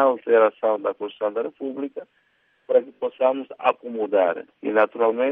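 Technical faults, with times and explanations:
No technical faults are audible anywhere in the clip.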